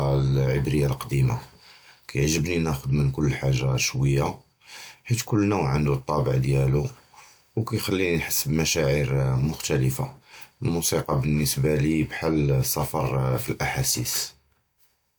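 A block of digital silence at 2.38 s interrupts this speech clip: for about 2.5 ms the sound drops straight to silence and then returns, with no fade on either side. Because the waveform jumps abruptly to nothing and back, each edge produces a discontinuity, and the gap is so short that it is heard as a tick or dip rather than an audible hole. Such a block typically appears when the output buffer was not filled in time.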